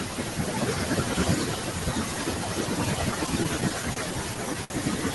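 Speech with noise suppressor artifacts running through the whole clip: the suppressor pulls down the bands it judges to be steady noise frame by frame, so the room noise, sitting about 16 dB below the voice, pumps away in the pauses and swells back under the speech. On a spectrogram this shows as blotchy, flickering patches of background energy that come and go with the speech. The same processing also cuts into the speech itself from 0.0 to 5.1 s, treating quiet consonants and word endings as noise and pushing them down by as much as about 18 dB, so they sound swallowed or faint. On a spectrogram the high-frequency consonant energy looks ragged or missing, and in the waveform the word tails shrink abruptly instead of decaying. Between 3.11 and 3.98 s there are repeated stalls (stutter): packets kept arriving late, the jitter buffer repeatedly ran dry, and the receiver held the last sound each time, for about 89 ms in total and no more than 30 ms at once, roughly 10% of that stretch. 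Nothing is lost, but the audio drags and stutters. The waveform shows small repeated, smeared segments, and the spectrogram shows brief horizontal streaks where the spectrum freezes. A short stall from a late packet follows at 4.64 to 4.72 s, when a delay jump of 58 ms left the buffer empty and the last sound was stretched for 58 ms before playback resumed from the same point. It is heard as a held sound with a slight buzz, seen as a flat, frozen band on the spectrogram and a repeating, slightly dipped section in the waveform.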